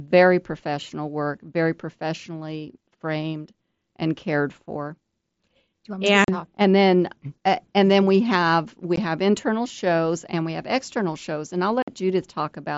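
Unconcealed Bluetooth headset packet loss punches three holes in the speech. The first runs from 6.24 to 6.29 s, just before "and then uh and". The second is at 8.96 s, after "and then we have". The third runs from 11.82 to 11.88 s, after "external shows and I'll". Lost headset packets were replaced by silence or an idle pattern, leaving abrupt 38, 15 and 53 ms dropouts. On the waveform these are gaps with sharp edges. The spectrogram shows them as vertical stripes across the full mSBC band, up to 8 kHz.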